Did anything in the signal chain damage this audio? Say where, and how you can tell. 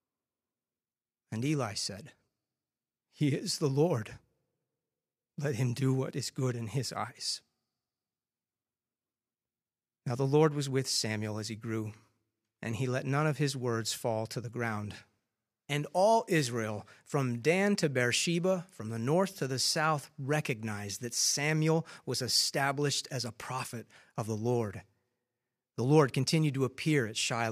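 No, nothing in the signal chain has left an audible mark on this speech recording. There is no point in the clip where any stage, from capture to playback, can be heard altering the sound.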